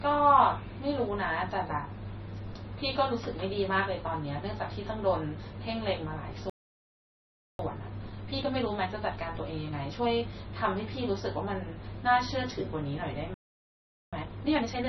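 Throughout the speech the sound is narrow and watery. The treble is cut off, so s sounds lose their edge and turn into swirly, chirping smears, and attacks blur. This is MP3 compression, and the heavy damage fits a bitrate of roughly 23 kbps. The likely cause is an encoder short of bits that cuts the treble and drops weak frequency lines from frame to frame. The swirl is what tells it apart from a plain low-pass filter, which would dull the sound but stay steady.

From 6.50 to 7.59 s the audio stops dead for about 1.1 s, then picks up again. That is a playback stall, likely caused by the player running out of data or having its thread blocked.

From 7.59 to 10.59 s the speech runs hurried at 1.1 times normal speed. This is time-compressed catch-up. The player trims and cross-fades small pieces to clear its backlog. The pitch stays normal, which rules out a simple speed-up.

A second stall silences the audio from 13.34 to 14.13 s, for about 0.78 s. 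Catch-up follows from 14.13 s to the end, this time much more rushed at 1.5 times speed, again without any change in pitch.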